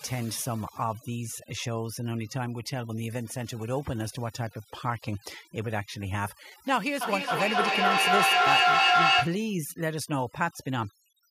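Speech recording with overdone noise removal running throughout. A noise reduction stage set too aggressively is cutting individual frequency bands whenever their level sits near its noise estimate. The background is pulled down and breaks into twinkling, warbling specks, and the quieter parts of the voice are cut along with it. From 7.01 to 9.45 s there is feedback echo between two devices. Two devices sharing a room are on the same call: one plays back what the other's microphone captured, and that microphone picks the playback up again. Each device's echo canceller only removes its own output, so the loop goes uncorrected. The speech returns at a fixed interval of roughly 300 ms, each pass thinner and more ringing. Because the loop is loud, the repeats build up rather than decay, reaching about 8 dB above the direct speech.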